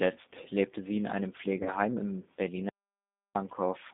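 From start to finish the speech sounds narrow, rough and faintly synthetic, with everything above about 3.7 kHz and below about 200 Hz gone. That is the G.729 codec at 8 kbit/s, which rebuilds each 10 ms frame from a vocal tract filter, a pitch predictor and a few pulses rather than sending the waveform itself.

From 1.63 to 1.73 s the speech smears into a brief, fading stretch and stays weak or distorted before recovering. This is VoIP packet loss concealed by the speech codec. About 30 ms of audio went missing, which fits one lost packet, and the decoder extended its last pitch and filter to fill the hole. Because each frame builds on the one before, the damage lingers after the lost audio ends.

From 2.69 to 3.35 s the sound cuts to total silence, with no room tone, for about 0.66 s, then resumes mid-flow. This audio dropout to silence most likely came from the input being lost while the recorder went on writing silence, so anything spoken in that gap is gone.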